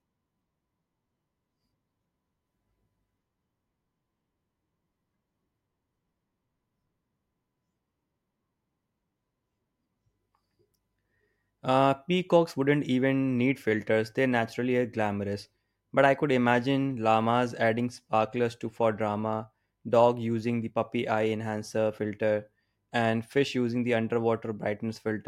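No technical faults occur at any point in this speech recording.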